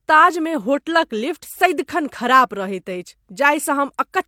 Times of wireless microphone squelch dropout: none

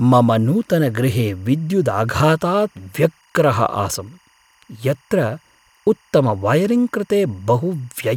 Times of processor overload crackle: none

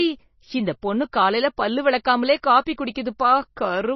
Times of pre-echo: 2.65

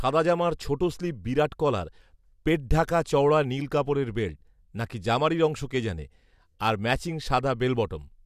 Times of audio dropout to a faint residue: none

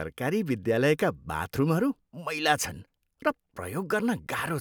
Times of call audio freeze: none

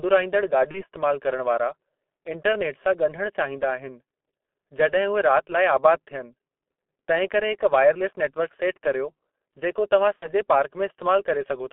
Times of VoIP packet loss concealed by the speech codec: 0.71-0.85, 10.16-10.30

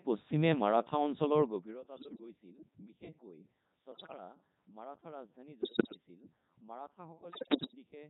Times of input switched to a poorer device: none

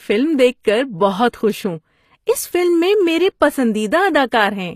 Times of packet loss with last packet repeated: none

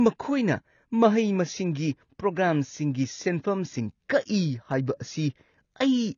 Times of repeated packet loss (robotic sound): none

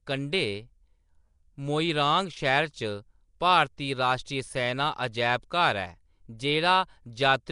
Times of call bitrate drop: none

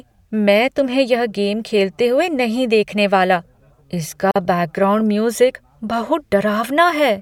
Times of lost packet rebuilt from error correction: none

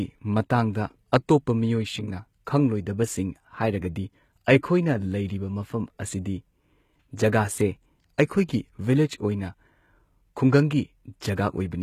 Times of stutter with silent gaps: none

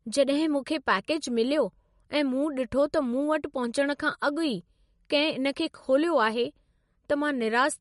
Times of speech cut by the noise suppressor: none

